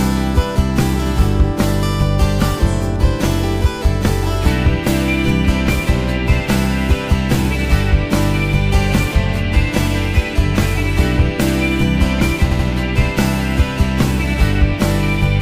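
At 12.50 s, a short block of compressed frames was delivered more than once, a case of repeated frames. The decoder replays a 78.4 ms stretch two extra times, which fits a run of three frames, producing an audible stutter until 12.66 s and lengthening the audio by 156.7 ms.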